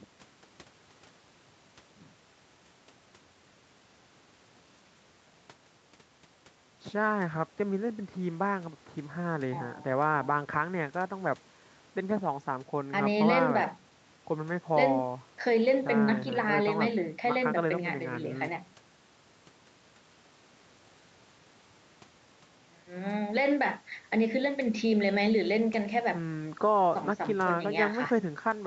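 Nothing stood out on listening to this speech recording, which carries the narrower top end of a call path with no content above about 8 kHz.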